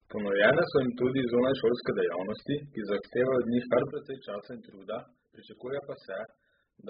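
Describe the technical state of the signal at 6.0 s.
At 6.0 s you're inside a sudden gain jump that started at 3.91 s and runs to the end. The level drops about 12 dB in a single step with no ramp, likely from a digital gain setting applied abruptly, so the speech and the noise floor fall together.

Over that sits heavy AAC compression across the whole clip. Nothing reaches above 5 kHz, so the speech sounds dull and smeared, with a warbly, fizzy edge on sibilants. That likely points to AAC-LC at a very low bitrate, around 8 kbps.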